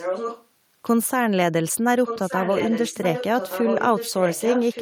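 A loudspeaker on the far end likely fed the call back into its microphone past an incomplete echo canceller, causing echo leak from 0 to 0.46 s and from 2.04 s to the end: a copy of the speech returns about 1.17 s late, only slightly quieter than the original.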